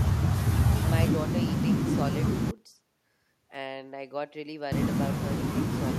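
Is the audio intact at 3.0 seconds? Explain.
Yes, the speech at 3.0 seconds plays through cleanly, with no dropout, click, distortion or other fault at that moment.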